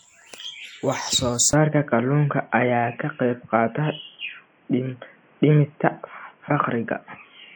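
At 1.51 s the audio falls silent for 20 ms. From then to the end, nothing passes above 3.3 kHz. The speech turns dull and boxy. The level shifts by about 5 dB. New background noise sits about 35 dB below the speech. Likely cause: input switched to a poorer device.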